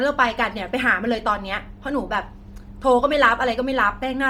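Bluetooth LC3 compression runs throughout the speech, heard as a breathy, grainy edge on the upper frequencies where detail has been replaced by a hiss-like fill. The likely cause is the LE Audio transform codec working at a low rate. It discards much of the high spectrum in each 10 ms frame and substitutes noise. The damage is heavy, which fits a bitrate around 32 kbps, even though content extends up to about 20.2 kHz.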